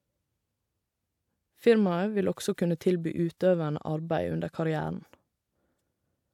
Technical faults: none

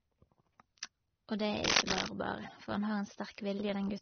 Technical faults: transcoding between lossy codecs; cable scratch noise

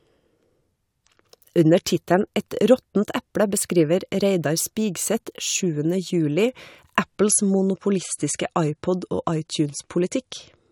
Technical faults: adaptive stream at a lower bitrate

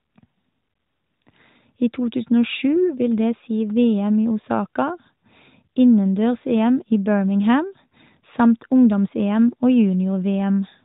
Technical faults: none

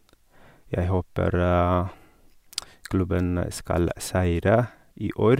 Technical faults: clock slip clicks

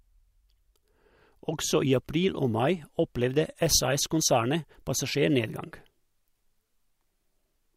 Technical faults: none

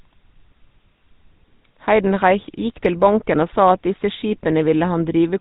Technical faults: GSM full-rate codec

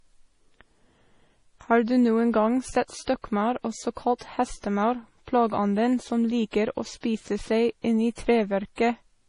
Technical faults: MP3 compression; pre-echo

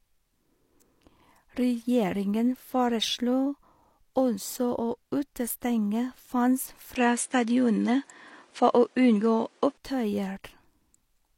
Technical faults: input switched to a poorer device

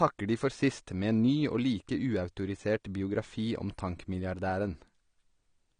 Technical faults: AAC compression

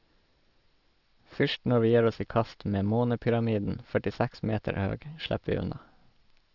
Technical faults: aliasing

